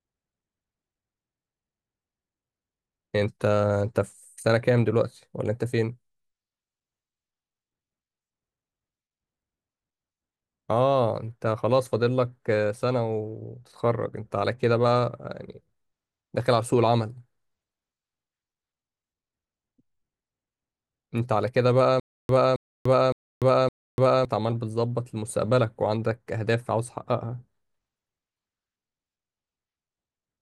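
From 22.00 to 24.25 s the speech catches on a single 270 ms fragment, which plays four times with about 293 ms of dead digital silence after each, so the burst returns every 563 ms at a steady, mechanical pace. This is a stutter with silent gaps. The likely cause is a stalled player or stream that replayed its last buffered fragment at each retry and then ran dry. Whatever should have sounded during those two seconds is gone.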